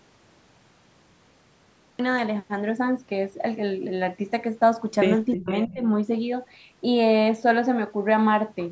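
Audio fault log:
0.00–1.99 s, cut-off start: The clip opens on dead digital silence, and at 1.99 s the speech appears abruptly, already mid-sound, with no natural attack or fade-in and a hard edge where it enters. The recording or stream began late and caught the talker partway through an utterance. The first 1.99 s hold nothing but the silent gap before capture actually started.
5.31–5.74 s, echo leak: A faint, delayed double of the speech trails behind it, arriving about a third of a second later (327 ms) and sitting about 15 dB below the direct voice. This is likely a loudspeaker on one end of the call feeding back into its microphone, with the echo canceller failing to strip all of it before sending it back.
5.34–5.48 s and 5.66–5.81 s, speech suppressed in double talk: In the first stretch the talker's voice all but vanishes, dropping by roughly 40 dB for around 150 ms. In the second it dips more gently, by roughly 10 dB, again for about 150 ms. 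Both overlap the echo passage. The likely cause is an echo canceller that couldn't separate near-end speech from returning echo while both were present, and ducked everything. The call's microphone processing, which carries nothing above 8 kHz, sits under all of this.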